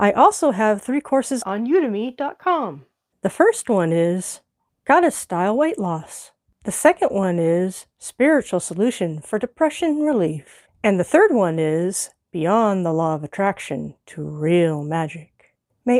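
No technical faults are audible.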